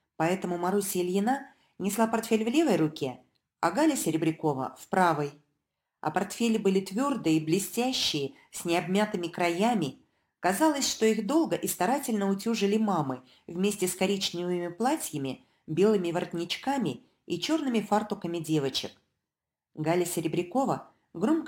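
All the way through there's crude rate conversion: a gritty, inharmonic fizz riding on the louder and brighter moments, roughly 25 dB under the sound. That fits a 48 kHz to 44.1 kHz change done by simply grabbing the nearest sample, no filtering.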